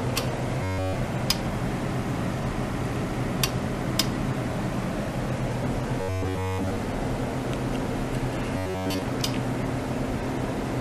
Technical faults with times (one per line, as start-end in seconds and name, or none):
0.63-0.95 robotic sound from repeated short buffers
6.01-6.76 robotic sound from repeated short buffers
8.57-9.02 robotic sound from repeated short buffers